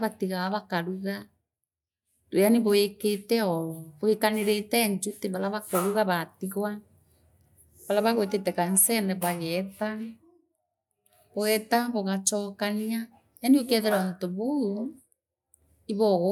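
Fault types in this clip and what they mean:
Nothing stood out on listening to this speech recording.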